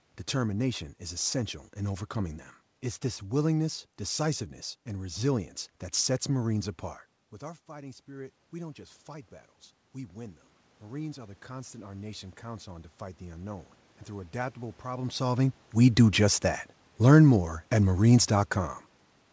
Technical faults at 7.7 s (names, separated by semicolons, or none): automatic gain rising